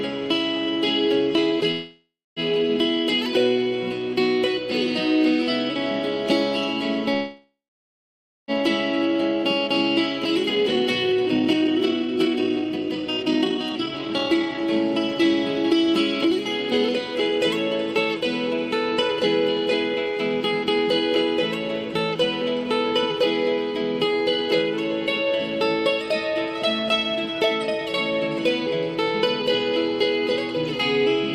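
The audio has two call audio freezes, at 1.71–2.39 s and 7.14–8.51 s. In each, the last sound is drawn out into a fading buzz or hiss that ends in silence (about 0.26 s and 0.92 s). On a spectrogram this looks like smeared horizontal bands trailing into a blank gap, most likely from delayed packets emptying the jitter buffer. Jitter buffer speed-up follows at 10.38–17.39 s, where the audio runs at 126% with about 2 s trimmed, and again at 18.54–20.77 s, at 106% with a fraction of a second removed. The pitch stays the same while the waveform's events are packed closer together.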